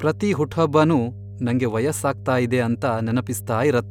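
A steady low drone sits under the speech from start to finish, fairly prominent at roughly 15 dB below it. This is mains hum at 50 Hz: a ground loop or a nearby transformer has let the power line leak into the signal path.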